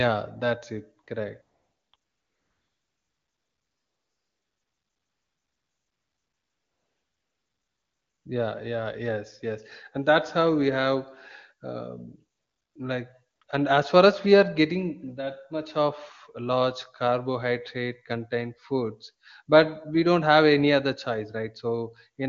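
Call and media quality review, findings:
AMR comfort noise: real background swapped for steady, smooth synthetic noise at 1.03–1.07, 1.41–1.93, 1.95–8.25, 12.35–12.75 (before "like and as far"), 13.35–13.41 and 13.43–13.47 s (before "and as far as"). Sender stopped speech frames; receiver generated noise from a coarse level and spectrum description.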